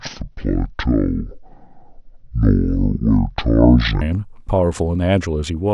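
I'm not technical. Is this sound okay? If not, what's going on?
No. From 0 to 4.01 s there is a section at the wrong speed: that part was likely played back on the wrong clock, at 0.556 times its proper speed. The speech drags slowly and sounds much deeper, nearly an octave low.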